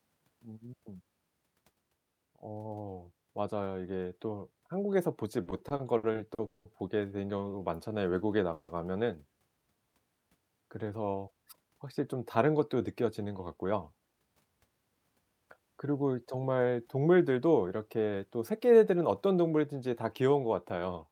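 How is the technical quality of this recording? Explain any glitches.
The recording has three network-playback faults, all between about 5 and 14 s of the speech.

Repeated stalls (stutter), 5.43 to 6.67 s: nine separate hitches, the longest 190 ms, together about 400 ms, roughly a third of that stretch. The jitter buffer kept running dry and the receiver stretched the last sound each time, so speech drags and catches repeatedly rather than breaking once.

Call audio freeze, 8.54 to 8.71 s: a single 150 ms hold where the last sound is drawn out as a fading buzz or hiss, never dropping to silence, then speech resumes where it stopped. This is likely one burst of delayed packets emptying the buffer. Unlike the stutter, it is one isolated pause.

Jitter buffer speed-up, 12.88 to 14.21 s: speech runs at about 111% speed while keeping its pitch, so it sounds hurried rather than chipmunk-like. 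The receiver trimmed tiny pitch-period slices, around 150 ms in total, to shed excess buffered delay. This is the opposite of a stall: time is removed, not inserted.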